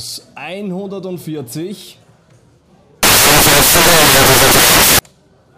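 From 3.03 to 4.99 s, samples built from the wrong bytes turn fast-changing low bits into each value's bulk, so the sound collapses into loud, harsh broadband noise.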